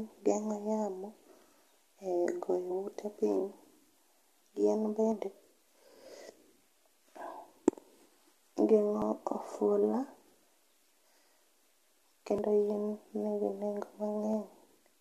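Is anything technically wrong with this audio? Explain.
Yes. There's audio missing between chunks: small skips at 3.17, 5.12, 7.07, 9.02, 10.97, 12.38 and 14.33 s, each losing around 50 ms, likely from 2-second chunk handovers dropping a sliver and butting the ends together.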